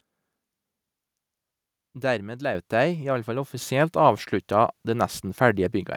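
Speech clip with two microphone volume stepped up faults: at 2.55 s the level jumps by about 7 dB, and at 3.57 s, right after "alle fall", by about 4 dB more. Voice and background rise together, as the device input gain is raised in single steps.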